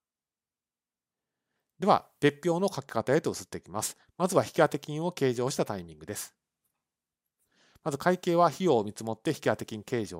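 Nothing goes wrong anywhere in this bit of speech, so there's really nothing here to flag.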